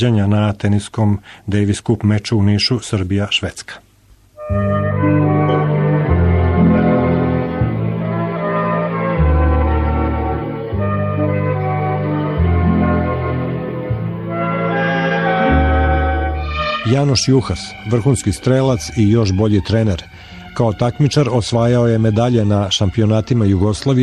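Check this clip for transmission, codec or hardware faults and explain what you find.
There is one hardware fault: periodic clock jitter, present for the whole clip. The converter's sampling clock is being shaken at a steady rate of around 100 Hz. Each sample is taken slightly early or late in a repeating cycle. This puts sidebands on every component of the sound, spaced about 100 Hz above and below it. Higher-pitched content suffers most. The result is a rough, metallic edge that follows the sound and disappears in silent gaps.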